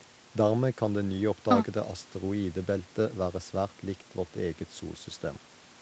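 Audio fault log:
No faults detected.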